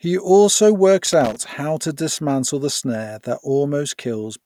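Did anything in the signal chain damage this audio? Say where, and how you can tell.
Yes. A loose connector in the analogue wiring disturbed the signal from about 1.05 s to 1.45 s. For roughly 0.4 s the speech is broken up by an irregular burst of crackle and scratching. That points to a worn or dirty contact that kept connecting and disconnecting as the plug or cable shifted, chopping the audio into fragments.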